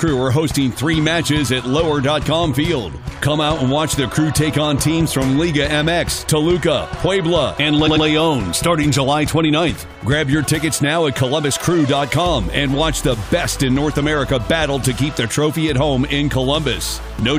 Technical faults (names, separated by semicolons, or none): repeated frames